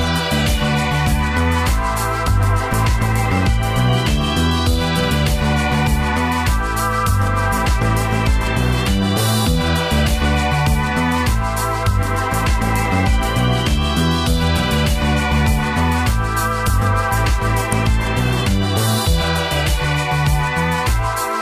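At 17.72 s there's a sharp snap, an electrical switching spike lasting only a couple of milliseconds and peaking around -5 dBFS. It sits on top of the sound rather than replacing it. The cause is likely a nearby switch, motor or static discharge throwing off a brief arc that the audio line picked up as interference. That's why it comes through as a sudden, very short click with nothing leading into or trailing after it.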